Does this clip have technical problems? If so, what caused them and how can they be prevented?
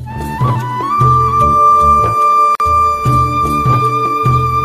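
Yes: a gap at a join of encoded pieces at 2.55–2.60 s, about 48 ms of silence where separately encoded segments meet untrimmed. Unlike a dropout, the sound resumes exactly where it stopped. Prevent it by trimming encoder delay and padding, or encoding the material as one continuous stream.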